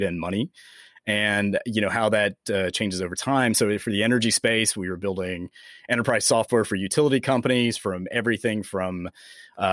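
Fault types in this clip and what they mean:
No faults detected on this speech clip; nothing to flag.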